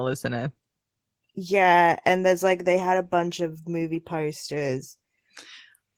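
Speech, marked by Opus voice compression from start to finish. The damage is plainly audible. The sound has the hoarse, slightly robotic grain of a linear-prediction coder working with too few bits for its excitation. The band stays full, so this is the hybrid mode, with SILK below 8 kHz and a CELT layer above it. The texture fits a rate near 16 kbps in 20 ms frames.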